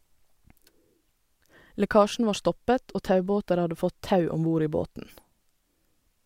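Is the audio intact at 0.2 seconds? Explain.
Yes, the audio is intact at 0.2 seconds, with no audible fault at that moment.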